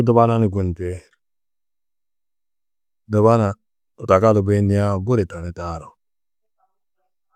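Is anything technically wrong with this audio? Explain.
No, nothing is technically wrong with this speech recording. No technical problem can be heard anywhere in it.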